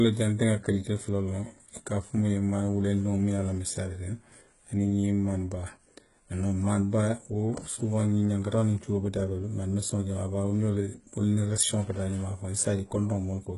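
The speech was likely squeezed through HE-AAC compression at a very low bitrate, which fits a rate near 12 kbps, for the whole clip. The codec keeps only the lower band and synthesises the upper band by copying lower content upward, so nothing survives above 11.1 kHz and the treble that remains is borrowed rather than real. The damage is heavy: sibilants come out gritty and lispy, with a metallic sheen where harmonics fail to align across the crossover.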